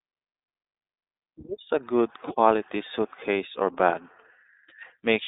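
From start to finish, the speech runs through the iLBC codec. Everything sits in a narrow band from about 250 Hz to 3.7 kHz, so it's boxy and thin, and each frame is coded on its own, which fits 20 ms frames at 15.2 kbps, leaving a plainly rough, synthetic edge.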